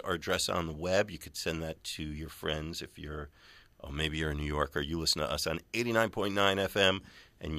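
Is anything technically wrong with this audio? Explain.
No, nothing technically wrong can be heard in this speech recording; the signal stays intact and consistent throughout, with no audible faults.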